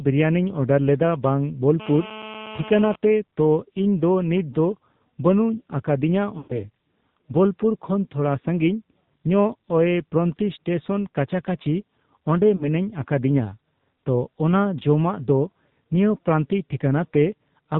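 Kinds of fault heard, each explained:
AMR narrowband mobile codec: The whole recording has been through the AMR-NB phone codec at around 7.4 kbps, so you're hearing 8 kHz sampled audio with nothing above 4 kHz. At that low rate the speech comes out noticeably buzzy and synthetic, because the codec rebuilds the voice from a vocal tract model fed by sparse pulses rather than sending the waveform itself. The damage is plainly audible all the way through.
GSM phone buzz: From about 1.80 s to 2.96 s, between "ᱵᱤᱨᱟᱭᱱᱤᱧ ᱚᱰᱟᱨᱞᱮᱫᱟ ᱵᱟᱝ" and "ᱛᱚ ᱤᱧᱫᱚ ᱱᱤᱛᱚᱝᱫᱚ", there's that raspy 217 Hz buzz with a stack of harmonics. A 2G handset close by was transmitting in bursts and the audio circuitry rectified the radio pulses. It holds steady, which fits a phone on a call, and sits about 13 dB below the speech.
Lost AMR speech frames: Two dropouts where frames got corrupted and the decoder filled in by repeating the last good pitch and vocal tract settings at falling gain. 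The first, at 6.38 to 6.67 s, covers about 120 ms, long enough for the sound to smear and fade toward silence. The second, at 12.56 to 12.68 s between "ᱴᱮᱥᱚᱱ ᱠᱟᱪᱟᱠᱟᱹᱪᱤ ᱚᱸᱰᱮ" and "ᱟᱠᱟᱫᱤᱧᱟᱹ ᱛᱚ ᱚᱱᱟ ᱡᱚᱢᱟᱜ", loses about 40 ms and is brief.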